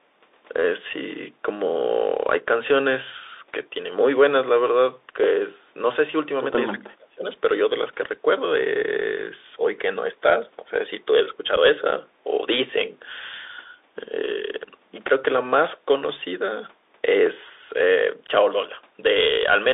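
Bluetooth CVSD headset codec, throughout: the speech runs through a narrowband headset link whose sound fits a 64 kbps CVSD stream. The line passes only about 300 Hz to 3.7 kHz, so the voice is thin and boxy. CVSD codes each sample as a single up-or-down step whose size adapts, and here the damage is plainly audible: sibilants turn scratchy, loud bright moments outrun the step and distort, and a granular hiss sits beneath the speech.

Speech suppressed in double talk, from 6.73 to 7.25 s: for about half a second the speech sinks sharply, by about 35 dB at its deepest, before recovering. The likely cause is an echo canceller facing both parties talking at once. Unable to separate the near talker from the loudspeaker echo, it attenuated everything, so the local voice was pushed down along with the echo it was trying to remove.

Unconcealed Bluetooth headset packet loss, from 11.56 to 11.58 s: a 7.5 ms hole opens in the speech with abrupt edges, consistent with a single lost packet between headset and phone. 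Nothing filled the gap except silence or an idle pattern, with no concealment to smooth it over. Because the CVSD decoder's step size has to rebuild after the gap, the speech returns briefly quieter before settling.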